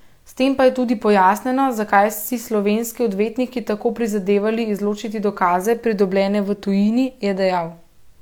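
Nothing stood out on listening to this speech recording, with no moment where the sound faltered or drew attention to itself.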